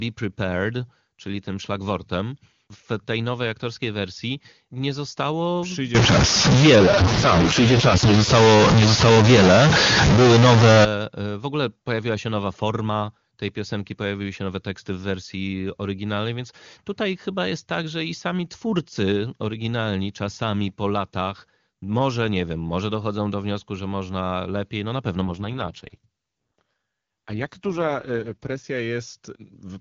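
From 5.95 s to 10.85 s, starting right after "aktorskiej wersji nie zostało" and clearing before "e w ogóle pojawiła", the speech carries a distortion, and the short pauses in that stretch fill with hiss instead of falling quiet. The likely cause is a stuck bit: one bit of the sample words held at a fixed value, so about half the samples are offset by that bit's weight, and the error flips with the sign of small values near silence.

Inside that stretch, from 6.75 s to 8.30 s, an AMR rate drop takes the AMR-WB stream from 23.85 kbit/s, where the codec is otherwise clean, down to 6.6 kbit/s. The bandwidth stays the same and nothing drops out, but the voice turns rough and synthetic, as the network trades coding bits for error protection on a weak link. The same drop recurs from 25.22 s to 28.64 s, just after "lepiej no na pewno", with the same raspy texture until the rate returns.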